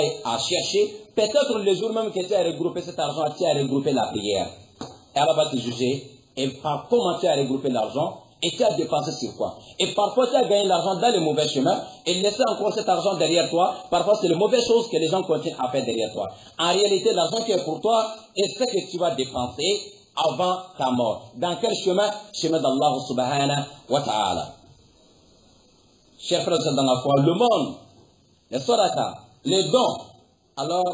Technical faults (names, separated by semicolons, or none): none